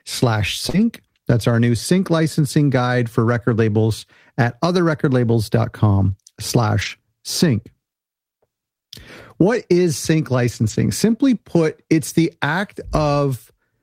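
At 0.69 to 0.75 s, about 40 ms of audio never reached the decoder in time. The short concealed packet loss was filled by extending the preceding sound, leaving a brief smear or wobble. Overlapping it, from 0.73 to 0.83 s, lost packets were rebuilt from error correction. The decoder played low-bitrate in-band copies carried in the following packets, so there is no gap, but the 60 ms rebuilt stretch, which fits three 20 ms packets, sounds rougher and noisier. The same roughening returns at 6.81 to 6.87 s over 40 ms, and again at 10.69 to 10.71 s for 20 ms just after "is sync".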